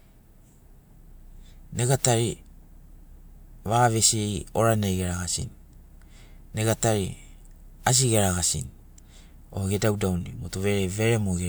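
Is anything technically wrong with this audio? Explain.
No, nothing technically wrong stood out on listening to this speech recording.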